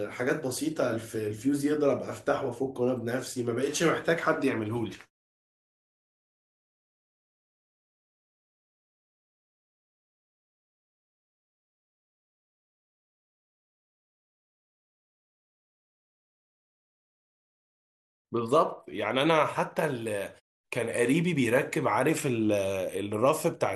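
Speech recording with no technical faults detected.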